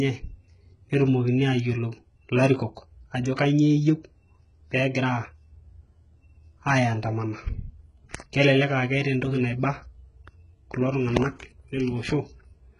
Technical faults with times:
0.00-12.79 HE-AAC compression
3.36-3.38 pre-echo

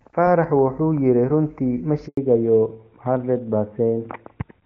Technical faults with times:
2.07-2.17 handover gap
2.17-4.66 fallback to narrowband

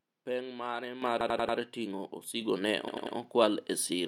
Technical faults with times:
1.02 microphone volume stepped up
1.21-1.58 repeated buffer
2.41 microphone volume stepped up
2.88-3.16 repeated buffer

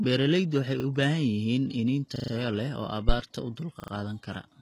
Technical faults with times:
0.00-4.62 HE-AAC compression
0.80-0.84 repeated buffer
2.16-2.32 repeated buffer
3.09-3.16 phantom power thump
3.80-3.92 repeated buffer

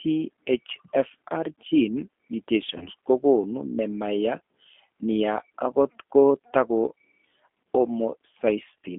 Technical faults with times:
0.00-8.98 G.729 codec
2.78-2.88 VoIP packet loss concealed by the speech codec
7.63-7.66 VoIP packet loss concealed by the speech codec

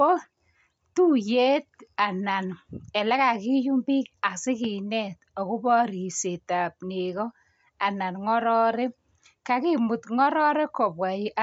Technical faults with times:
none

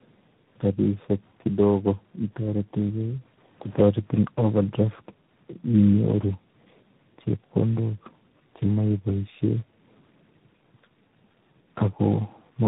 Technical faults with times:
0.00-12.67 tandem speech coding

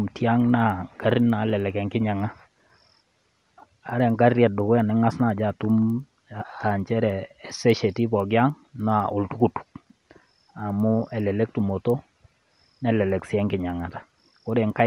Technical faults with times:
0.00-14.87 resampler restarted on every block

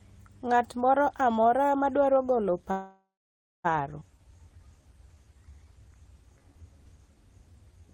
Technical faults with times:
2.71-3.66 call audio freeze
4.00-4.03 skip ahead
4.17-7.87 jitter buffer slow-down

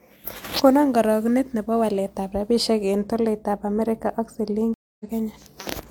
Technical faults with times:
4.74-5.05 stream reconnect

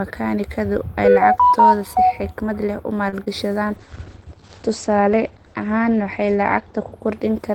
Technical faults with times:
3.09-3.14 short stall from a late packet
3.24-3.28 short concealed packet loss
3.66-7.54 call bitrate drop

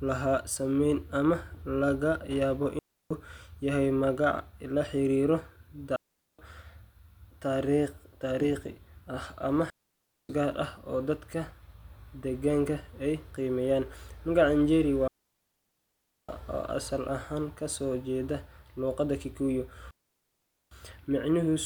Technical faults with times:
2.79-3.11 digital wireless dropout
5.96-6.39 digital wireless dropout
9.70-10.29 digital wireless dropout
15.08-16.29 digital wireless dropout
19.91-20.71 digital wireless dropout

